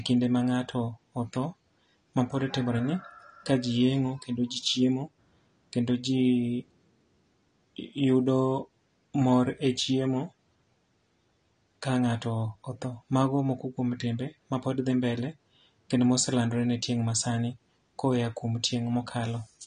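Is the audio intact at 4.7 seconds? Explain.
No. At 4.7 seconds, as throughout, the speech sounds dull and smeared, with a fizzy, warbling texture on sibilants and held sounds. This is likely AAC compression, and the damage fits an AAC-LC bitrate around 32 kbps, where quantising against a hearing model lowers the cut-off and leaves holes in the spectrum.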